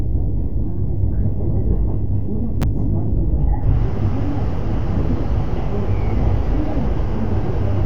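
At 2.61 s there is a brief burst of damaged data in a compressed stream, lasting until 2.64 s. Part of the encoded data at this point is corrupt. The decoder cannot read those frames correctly. It loses its place and hunts for the next valid frame header before playback resumes. The result is a short chirp or blip of about 36 ms.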